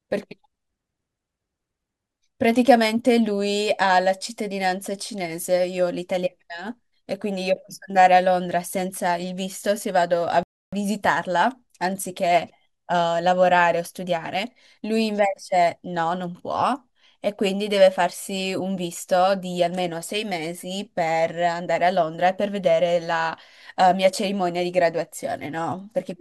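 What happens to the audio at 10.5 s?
At 10.5 s the player hits a rebuffering stall: it has used up all the audio it had downloaded and has to wait for more data before it can continue. From 10.43 to 10.73 s the speech simply stops and there is silence, then it picks up exactly where it broke off. No sound is skipped or lost, but the pause adds about 0.29 s to the clip's running time.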